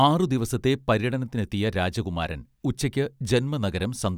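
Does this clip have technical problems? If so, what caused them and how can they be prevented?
No, this clip does not have technical problems.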